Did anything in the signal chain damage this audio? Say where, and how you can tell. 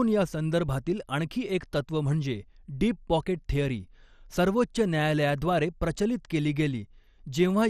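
Yes. At the codec stage, the speech sounds dull and granular throughout, with gurgling as upper sub-bands flicker on and off and nothing above 14.2 kHz. This is likely MP2 compression at a low bitrate. Unlike a plain low-pass filter, the remaining bands are coarsely quantised.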